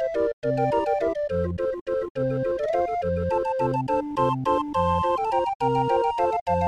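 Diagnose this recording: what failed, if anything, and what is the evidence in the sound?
Nothing failed: no stage in the chain shows a dropout, discontinuity, distortion or level anomaly anywhere in the sound.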